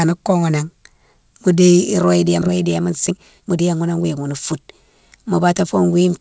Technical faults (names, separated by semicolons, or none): skip ahead; jitter buffer speed-up